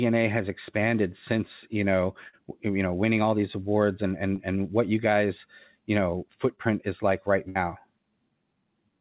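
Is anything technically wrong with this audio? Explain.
Yes. Two bursts of packet loss and two short concealed packet losses interrupt this speech.

Burst of packet loss, 2.28 to 2.39 s and 7.49 to 7.57 s: consecutive packets were lost or arrived too late, so the receiver extended the last sound and faded it, about 50 ms and 60 ms of fill, before jumping ahead with material missing. It sounds like a held, dimming buzz or hiss, then a skip.

Short concealed packet loss, 4.36 to 4.40 s and 6.56 to 6.59 s: roughly 20 ms never reached the decoder, and each hole was patched by continuing the preceding sound and crossfading back. These come across as a brief smear or wobble, with a consonant possibly dropping out.

The call passed through a G.711 mu-law codec at 64 kbps, so nothing is heard above 4 kHz.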